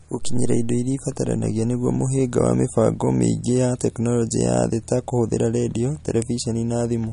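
A speech clip with MP3 compression damage throughout. Nothing sounds above 10.6 kHz. Weak detail flickers between frames, giving a watery, swirly texture and chirpy s sounds. The cause is likely a starved MP3 encoder, which fits a low bitrate near 40 kbps.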